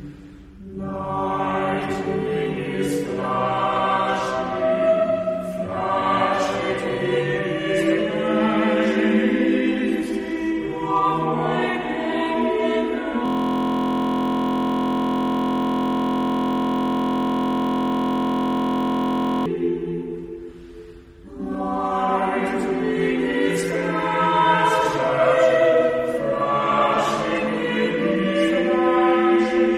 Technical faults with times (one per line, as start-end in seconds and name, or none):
13.26-19.46 system hang loop